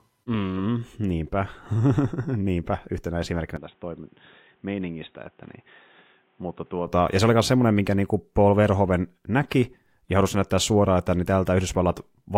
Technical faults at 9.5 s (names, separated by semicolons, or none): none